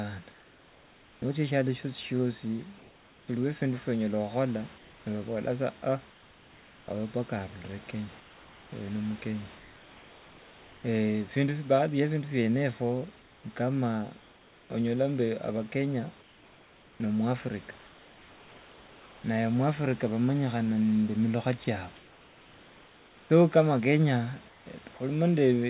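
Between 0.32 and 1.22 s, 2.78 and 3.28 s, 4.78 and 6.88 s, 8.2 and 10.84 s, 13.2 and 14.7 s, 16.22 and 19.24 s (ending just before "naye mwafrika"), and 21.64 and 24.66 s (after "nende milukha"), the room background in the speech pauses turns into comfort noise. It is a steady, featureless hiss with none of the room's texture, about 3 dB quieter in the first gap and about 2 dB quieter in the second. The likely cause is discontinuous transmission: the sender stops sending during silence and the receiver fills the gap with synthetic noise. Like the rest of the audio, this noise stops at 4 kHz, the limit of the call codec.

At 21.64 s, right after "nende milukha", the voice detector drops a sound. About 20 ms of sound goes missing and the comfort-noise pause takes over at once. This is likely because the detector took the sound for background and stopped sending early.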